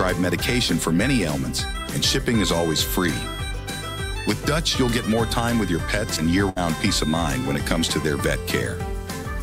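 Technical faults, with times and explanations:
6.49 to 6.58 s, burst of packet loss: several consecutive packets failed to arrive in time, so the receiver extended the last sound for about 67 ms while fading it down, then resumed playback with roughly 60 ms of audio skipped.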